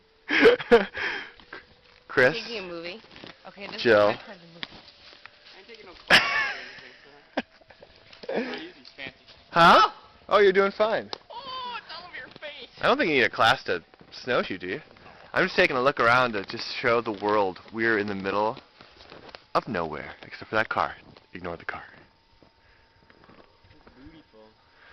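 Compressed frames skipped at 14.43–14.48 s and again at 15.69 s: each time the audio jumps ahead by roughly 40 ms, which fits two missing or rejected 20 ms frames.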